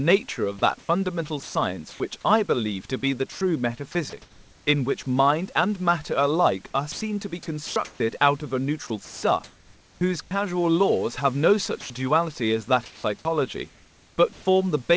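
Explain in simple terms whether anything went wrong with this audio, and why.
Speech in five stretches comes through choppy: 0.59–2.00 s, 3.32–4.67 s, 6.92–8.00 s, 8.87–10.31 s and 12.86–14.45 s. Parts of each, from 0.33 s up to 0.87 s in total, are replaced by a soft synthetic hiss. This is sound chopped by the voice detector: the sending side likely kept deciding quiet parts of the speech were background and stopped transmitting them.

A single short gap at 11.81–11.90 s loses 90 ms of speech, filled with the same steady hiss before the speech returns. This is sound dropped by the voice detector: the sender likely took that quiet moment for background noise and stopped sending until the speech got louder again.

The call codec carries nothing above 8 kHz, so the sound is dull.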